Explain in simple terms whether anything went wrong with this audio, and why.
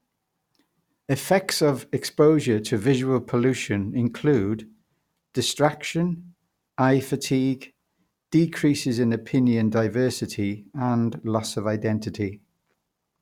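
Nothing went wrong here: no dropouts, glitches or distortion anywhere in the speech recording.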